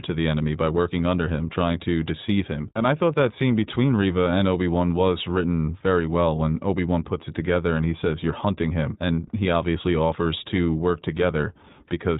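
The whole way through, the speech has that iLBC codec sound: nothing above 4 kHz, and a plainly audible rough, slightly synthetic edge. Each short frame's excitation is coded on its own, and the texture fits iLBC's 20 ms mode at around 15 kbps.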